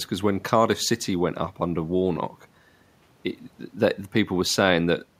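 The speech comes through with no technical faults, and the faint room noise in the background sits about 39 dB below the voice as part of the recording itself.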